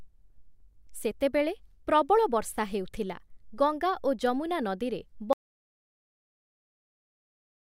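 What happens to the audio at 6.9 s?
At 6.9 s there is dead silence with no room tone: an audio dropout to silence from 5.33 s to the end, right after "ଯମୁନା ନଦୀରେ", likely from the input being lost while silence was recorded.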